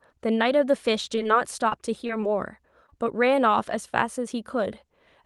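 Short concealed packet loss occurs at 1.15, 1.23, 1.69, 2.07, 2.21, 2.86 and 2.90 s. Each time, about 20 ms of speech arrived too late and was patched by continuing the preceding sound. Unlike a dropout, nothing goes silent; each gap is a brief smear, and the adjacent pair near 2.9 s blurs longer.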